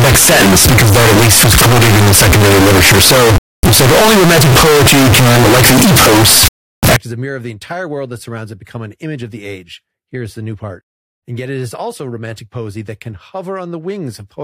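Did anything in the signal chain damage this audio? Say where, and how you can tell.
Yes. From the start to 6.96 s the speech is brutally loud and harsh, clamped into a near-square wave sitting at an almost fixed, high level, with background noise pushed up to the same level as the talking, though the pitch contour still comes through. That points to the sample-format conversion stage, likely a float read as integer: 32-bit float samples interpreted as 32-bit integers, so sign and exponent bits dictate amplitude regardless of the original level.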